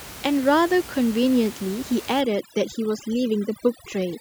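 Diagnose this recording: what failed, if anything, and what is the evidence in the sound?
Overdone noise removal from 2.21 s to the end, in the call-processing stage. The room noise, about 17 dB below the speech, drops and breaks up into twinkling specks. Bands near the noise estimate are cut hard, taking quiet speech detail with them.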